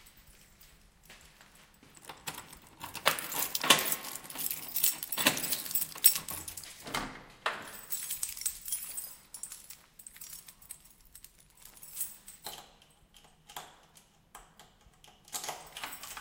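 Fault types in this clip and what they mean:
No faults can be heard.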